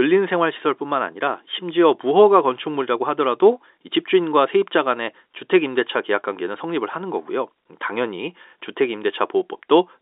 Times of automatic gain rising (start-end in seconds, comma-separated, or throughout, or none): none